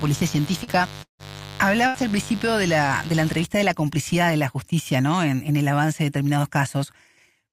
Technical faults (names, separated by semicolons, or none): mains buzz; short concealed packet loss; long network dropout; burst of packet loss